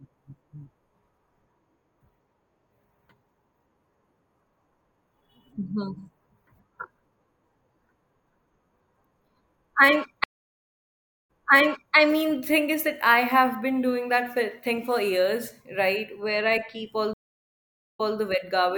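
The connection dropped twice, and each time the player reconnected and started a fresh decoder mid-stream: a stream reconnect. At 10.24 s the speech cuts to about 1.04 s of silence. It returns at 11.95 s on "I mean thing is", repeating roughly 0.67 s already heard because the server resent a burst. At 17.13 s a second gap of about 0.84 s follows, ending at 18.17 s with a shorter 0.19 s repeat. Both restarts come in muted or faded.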